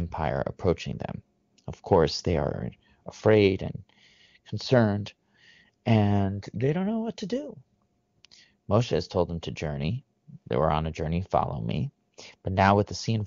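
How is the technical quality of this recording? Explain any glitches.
The speech carries no audible glitches or dropouts, and it comes through the AMR wideband (HD Voice) codec path with the clear, full-bodied character of that codec's higher rates.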